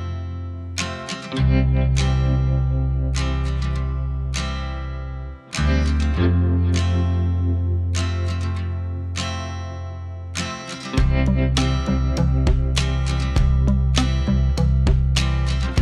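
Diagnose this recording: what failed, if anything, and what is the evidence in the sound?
Nothing in the signal points to a failure at any stage of the chain: level, continuity and timing hold steady throughout, leaving nothing to trace back to wiring, conversion, buffering, processing, transmission, storage or playback.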